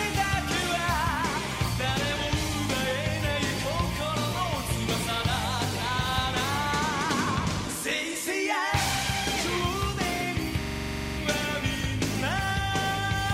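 A system hang loop runs from 10.62 to 11.18 s, where one 42.67 ms piece repeats 13 times at 23.4 Hz, which fits a 2048-sample ring buffer cycling while the system froze.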